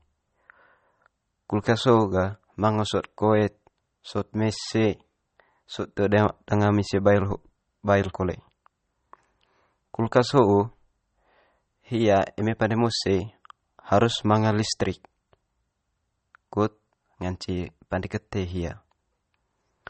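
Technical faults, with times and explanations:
Throughout, MP3 compression: the speech has nothing above 8.4 kHz and sounds watery and swirly, likely from a low-bitrate encode, around 32 kbps, starving the treble.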